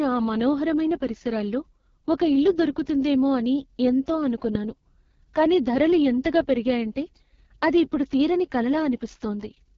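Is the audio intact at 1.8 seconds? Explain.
No. At 1.8 seconds, as throughout the clip, the speech has passed through the AMR wideband (HD Voice) codec at what sounds like its lowest rate, around 6.6 kbit/s. At that rate the pulse-driven vocal tract model has too few bits to follow the voice closely, so the speech comes out rough and raspy, with heavy coding damage. Above roughly 6.4 kHz only shaped noise remains, and nothing is heard above about 6.9 kHz.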